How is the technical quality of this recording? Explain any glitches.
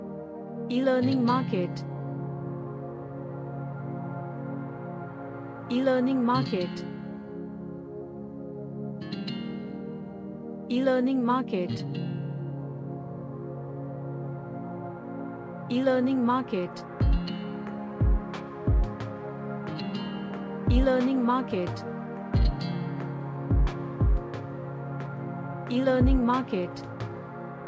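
The technical quality is good, with no glitches to explain.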